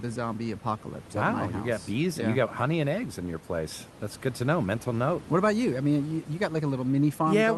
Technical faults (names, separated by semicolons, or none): none